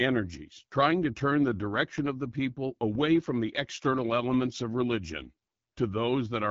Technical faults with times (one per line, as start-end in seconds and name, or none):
0.00-6.50 AMR wideband (HD Voice) codec